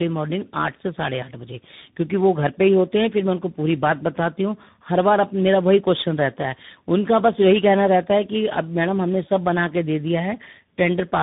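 From start to finish the speech passes through tandem speech coding: three speech codecs in a row, which sounds like CVSD, then a low-rate G.729A-type stage, then CVSD again, each re-coding the last one's damage. The result is rough, muffled and warbly, with nothing above 3.7 kHz.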